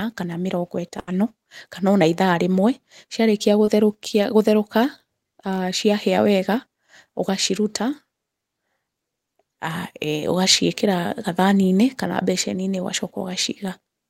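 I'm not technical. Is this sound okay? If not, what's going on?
No. A burst of packet loss at 0.99 to 1.09 s drops about 80 ms of speech; the receiver stretches the last sound and fades it out, then jumps ahead. A short concealed packet loss at 3.65 to 3.69 s loses about 20 ms, patched over so quickly it comes across as a brief smear or wobble.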